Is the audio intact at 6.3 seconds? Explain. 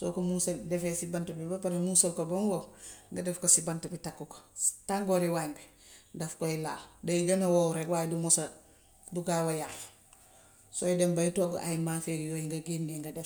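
Yes, the speech at 6.3 seconds plays through cleanly, with no dropout, click or other audible fault at that point.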